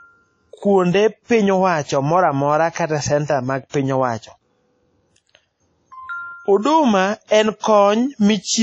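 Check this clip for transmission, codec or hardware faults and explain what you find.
The clip shows one fault, present for its whole length: WMA compression. The speech has likely passed through a Windows Media Audio encoder, and the plainly audible damage fits a low bitrate of around 32 kbps. The transform coder spreads its quantisation noise over long blocks and drops weak spectral lines, and nothing remains above about 9.9 kHz. The result is dull, ringing and washy, with a hiss that swells and fades along with the speech.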